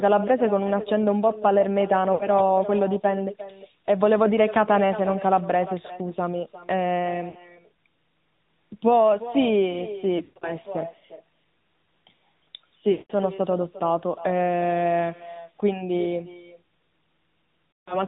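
From the start, the speech carries an echo with no canceller. Each phrase returns about 0.4 s later, about 14 dB quieter and thinner, because the far end's loudspeaker feeds its microphone and nothing strips the copy out. Unlike room reverberation, which smears continuously into a decay, this is a distinct delayed repeat of whole syllables.

Throughout, the sound also bears the AMR narrowband mobile codec. Nothing above 4 kHz survives, and the coarse vocal-tract model gives a plainly audible buzzy, synthetic edge, which points to a mid-rate mode of about 10 kbps. A simple low-pass filter would only dull the top end. Here the texture of the sound itself is rebuilt and roughened.

Lost AMR speech frames appear at 2.14–2.30 s (60 ms lost), 7.30–7.41 s (40 ms), 10.18–10.53 s (180 ms scattered over 240 ms, longest run 120 ms), 12.92–13.12 s (180 ms) and 17.76–18.04 s (160 ms). The decoder repeats the last good pitch and spectral shape at falling gain. 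The longer runs draw the sound out and fade it toward silence, and it resumes weak or rough. Unlike packet dropouts in uncoded audio, these have no hard cut or click, only a smooth smearing fade.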